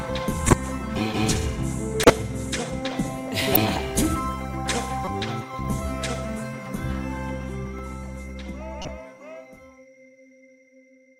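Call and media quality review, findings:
Corrupt frame decoded: short chirp-like bursts at 0.47–0.53, 2.03–2.10, 3.53–3.57, 5.05–5.08 and 8.82–8.88 s. Damaged codec frames played through, misplacing energy. First three loud, near about -5 dBFS; later ones quieter.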